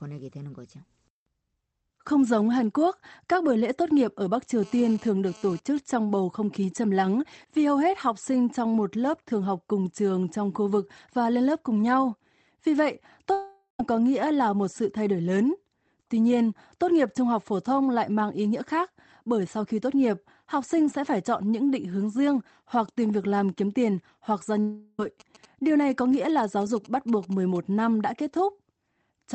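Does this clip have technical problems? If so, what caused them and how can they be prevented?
Yes. GSM phone buzz, 4.63 to 5.79 s: a nearby 2G phone exchanging data sends radio bursts 217 times a second. The audio circuit rectifies them into a raspy, intermittent 217 Hz buzz about 24 dB below the speech. Keeping phones well away from microphones and cables, or using shielded leads, prevents it.

Long network dropouts, 13.32 to 13.80 s and 24.60 to 24.99 s: the last sound is continued and fades away, with about 0.1 s of silence in the first. About 0.47 s and 0.38 s of audio are lost, likely because packets stopped arriving. A more stable connection and a larger jitter buffer would prevent this.

GSM signalling bursts, 25.2 to 27.57 s: a nearby 2G phone sends short groups of bursts that are rectified into a galloping dit-dit-dit of brief 217 Hz buzzes, roughly 25 dB below the speech. Moving the phone away or switching it to flight mode prevents them.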